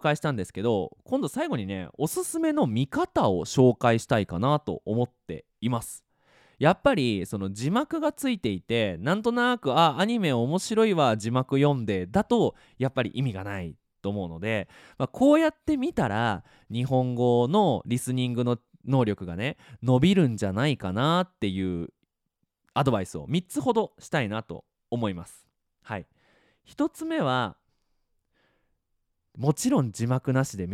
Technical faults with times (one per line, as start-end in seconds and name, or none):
none